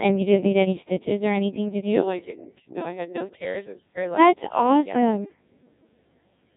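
It's a speech clip that's been through the Codec 2 vocoder for its whole length, and the damage is heavy. Rather than keeping the waveform, Codec 2 sends only pitch, voicing, energy and a rough spectral envelope, then rebuilds the voice from sine waves, so you get that robotic, buzzy quality throughout. The heavy damage fits its low 1.6 kbit/s mode, and there's nothing left above 3.8 kHz.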